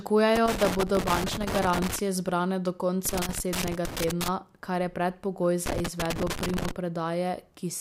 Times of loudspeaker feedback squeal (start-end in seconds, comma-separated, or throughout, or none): none